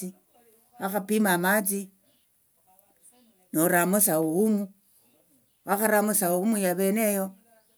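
No faults detected anywhere in the speech recording.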